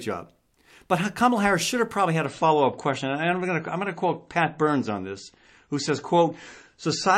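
The adaptive stream dropped to a lower bitrate at 2.25 s, just after "should have probably had", and stays there to the end. The switch is abrupt with no gap: treble vanishes above about 8.3 kHz and swirly MP3 artefacts thicken, which fits a fall from 128 to 32 kbit/s.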